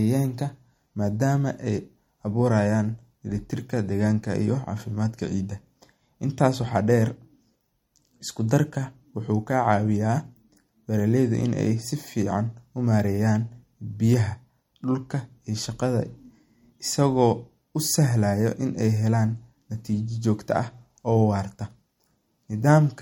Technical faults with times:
0.00-23.01 MP3 compression

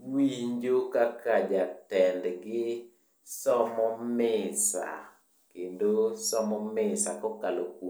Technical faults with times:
none

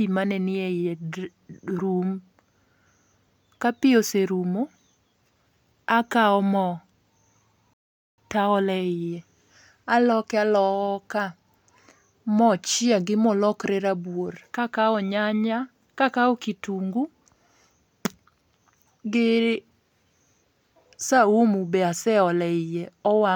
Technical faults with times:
7.73-8.18 rebuffering stall

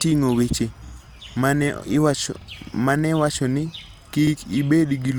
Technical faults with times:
0.88-0.93 repeated buffer
2.41-2.46 repeated buffer
4.27-4.32 repeated buffer

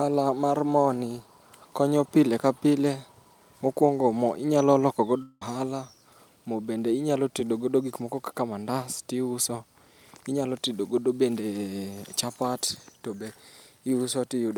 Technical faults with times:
5.22-5.42 long network dropout

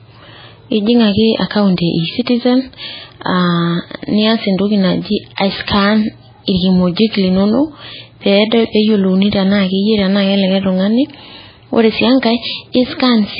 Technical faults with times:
0.00-13.39 MP3 compression
5.36-5.38 pre-echo

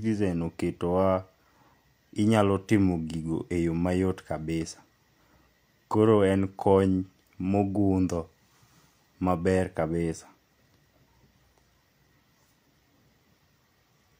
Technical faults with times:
none

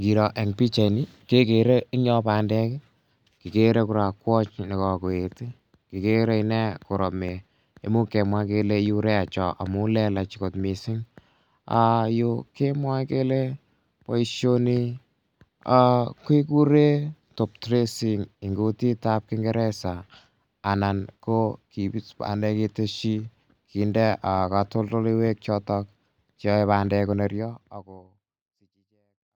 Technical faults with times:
none

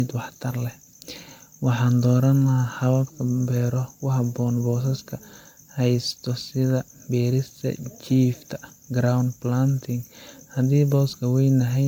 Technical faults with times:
0.00-11.88 generation loss

